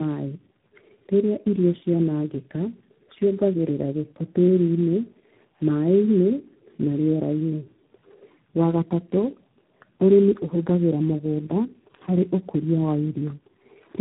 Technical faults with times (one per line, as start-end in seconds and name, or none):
0.00-14.01 tandem speech coding